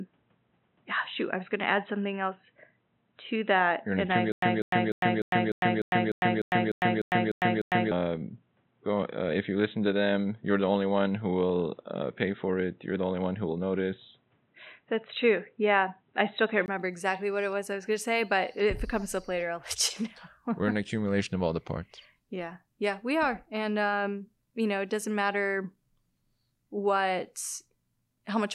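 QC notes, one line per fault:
0.00–16.68 s, input switched to a poorer device. The sound is dull and boxy, with nothing above 3.9 kHz, faint added noise about 45 dB down, and a level about 5 dB different. A 20 ms silence at 16.68 s precedes the clearer sound at "exactly what it was". Likely a change to a narrower-band microphone or headset profile.
4.32–7.91 s, stutter with silent gaps. A 196 ms fragment repeats twelve times, each followed by about 103 ms of digital silence, giving an even 300 ms cycle. The audio that should fill this span is missing. Likely a stalled player replaying its last fragment at each retry.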